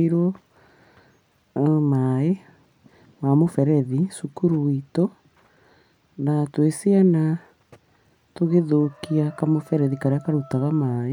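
Nothing in this recording stood out as a technical fault on listening.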